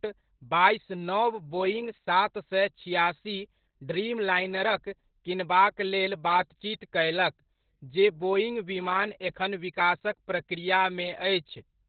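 Throughout the clip, Opus voice compression is running at a very low bitrate, which fits about 8 kbps, with the SILK speech coder in narrowband mode. Nothing survives above 4.5 kHz, and the coarse excitation coding leaves the speech muffled, hoarse and faintly robotic.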